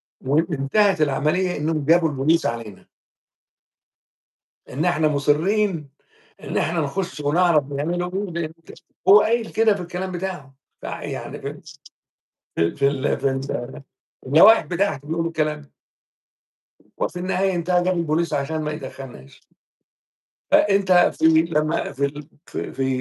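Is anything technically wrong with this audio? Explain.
No, nothing technically wrong turns up anywhere in this audio.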